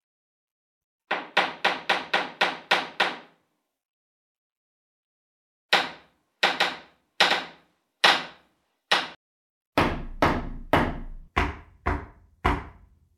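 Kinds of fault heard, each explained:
Doubled audio track: from 6.59 s to 9.15 s a second, full-band copy of the sound runs about a second behind the original, roughly 5 dB quieter, with no decay or added room colour, and it cuts in and out abruptly at those edges rather than fading. The likely cause is the same audio being mixed in twice, either captured again through a slower path or left as two out-of-step copies by an edit.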